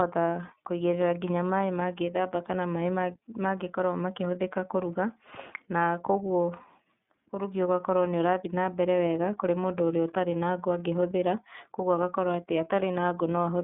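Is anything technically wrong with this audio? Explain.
Yes, two faults are audible.

Throughout, the speech carries plainly audible iLBC codec damage. The codec rebuilds each 30 ms frame's excitation on its own, which fits its 13.33 kbps mode. The result sounds slightly rough and synthetic, confined to roughly 150 Hz to 3.6 kHz. A spectrogram shows an empty region above 3.8 kHz.

From 6.07 to 6.40 s there is a phantom power thump. A supply switching on the live input pushes a voltage step through the coupling capacitors, producing a deep thud that decays in about 75 ms. The waveform shows a slow low-frequency swing.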